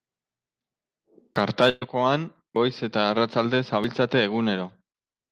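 It's a speech clip with small jumps at 1.36 s, 2.56 s (just before "goiz eta arratsalde") and 3.84 s (right after "goiz eta arratsalde"). Each skips ahead a few tens of milliseconds, closer to a tenth of a second at 2.56 s, most likely dropped buffers (overrun). From 1.69 to 1.83 s there's a burst of packet loss: about 120 ms is missing, filled by a fading continuation of the last sound before the audio picks up further on.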